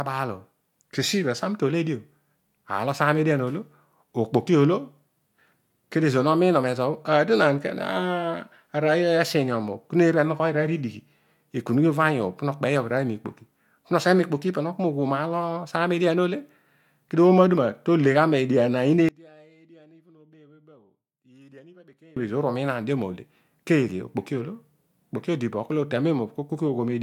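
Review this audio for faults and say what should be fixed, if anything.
From 19.09 to 22.17 s the speech falls by about 30 dB in mono, likely one channel inverted, cancelling the centred content. Check and correct channel polarity before summing or exporting.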